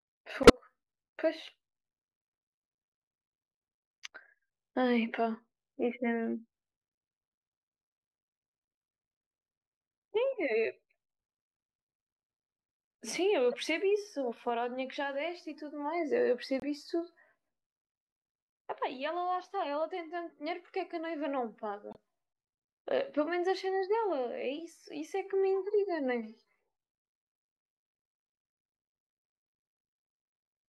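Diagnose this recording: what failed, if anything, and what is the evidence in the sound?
At the codec stage, a corrupt frame decoded fault recurs: bit-flipped compressed frames, two or three at a time, were played instead of concealed. Misread gains and codes produce brief chirps, squeaks, blips or noise bursts at 0.43–0.50 s (loud), 13.52–13.55 s, 16.60–16.64 s and 21.91–21.97 s (much quieter).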